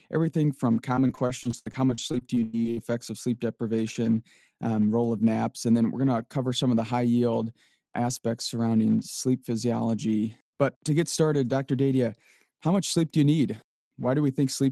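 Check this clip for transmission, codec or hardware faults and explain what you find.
One transmission fault is present. From 0.95 to 2.79 s, between "everything from" and "of sleep deprivation um", there is repeated packet loss (robotic sound). Dropouts up to 99 ms long recur in quick succession, and each is patched by extending the preceding audio. About a quarter of the stretch is concealed, so the speech turns choppy, with pieces missing. The surrounding audio carries the coding texture of a call codec, and the top end stops near 12 kHz.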